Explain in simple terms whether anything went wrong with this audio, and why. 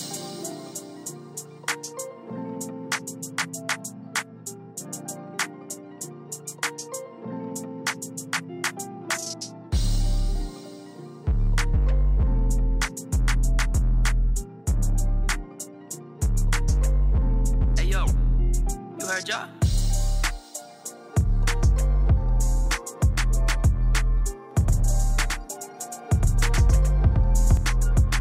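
From 24.51 to 27.57 s, the sound has a slightly quieter copy trailing a tenth of a second behind: a doubled audio track, likely from a second, slower recording path.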